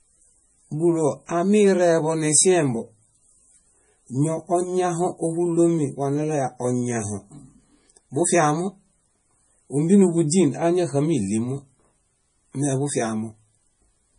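From start to finish the speech carries heavy damage consistent with MP3 compression, likely encoded at a low rate around 32 kbps. Starved of bits, the encoder has cut all content above 10.5 kHz, which leaves the top end dull, and has dropped weak spectral lines that then flicker in and out between frames. The result is a watery, swirling texture on the voice, with smeared consonant onsets and a metallic edge on s sounds.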